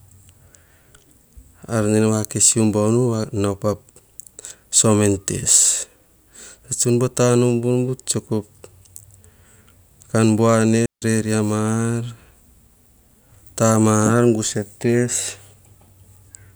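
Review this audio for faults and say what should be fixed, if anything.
Right after "kan buane", at 10.86 s, the speech drops into a clean hole that lasts until 11.02 s, about 160 ms of near silence. That's a classic digital wireless dropout: the receiver lost too much of the data stream to rebuild the audio, so it muted with a very quick fade instead of passing garbage. You can tell because there's no crackle or noise burst on either edge, just a tidy gap. To prevent it, keep clear line of sight between transmitter and receiver and pick a clean, uncrowded frequency before the take.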